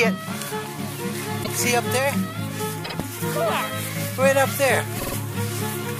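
There's a stutter from repeated frames at 1.43 s, where a 78 ms block plays twice. At 2.84 s a 52 ms block plays three times, and at 4.98 s four times. The same compressed chunk got repeated, so each repeat stretches the audio.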